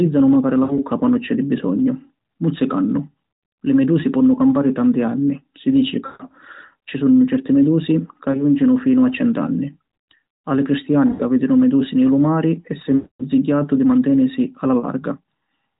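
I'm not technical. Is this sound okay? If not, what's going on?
No. This is a mobile call with lost AMR speech frames: radio errors corrupted bits of the signal, so the phone filled each gap by stretching the last good sound while fading it. You hear brief dips, warbles or smeared, fading sound at 0.64, 6.06, 8.32, 11.10, 12.96 and 14.80 seconds. The longest is at 12.96, just before "di mantenisi".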